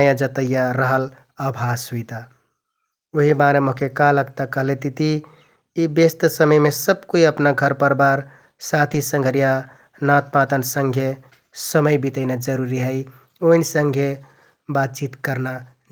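At 3.77–3.83 s, just before "का लगता", and at 8.89–8.95 s, just before "संघरिया नाँतपाँतन", lost packets were rebuilt from error correction. The next packet's low-bitrate copy filled each gap, so the speech continues without dropout but turns briefly rougher and noisier, consistent with two packets lost each time.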